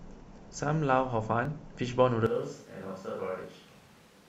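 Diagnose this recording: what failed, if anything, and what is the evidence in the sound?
Overlap between stream segments, at 1.45 s and 3.44 s, is a network and playback fault: two streamed segments claim the same stretch of time, and the player trims the overlap from sound that was never doubled. Each join jumps with a tiny skip, two seconds apart, which fits 2-second segments.

Switch to a distant microphone, from 2.26 s to the end: speech abruptly turns roomy and hollow, thinner in the bass, roughly 5 dB quieter, with room noise about 25 dB below speech. Likely the close microphone dropped out at the capture stage and a farther one took over.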